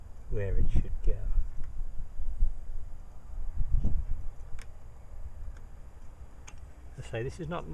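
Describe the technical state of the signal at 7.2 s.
At 7.2 s the signal is intact, with no audible fault at that moment.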